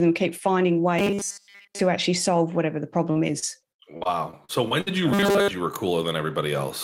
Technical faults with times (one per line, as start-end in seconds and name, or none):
0.99-1.80 robotic sound from repeated short buffers
3.11-4.88 repeated packet loss (robotic sound)
5.13-5.51 robotic sound from repeated short buffers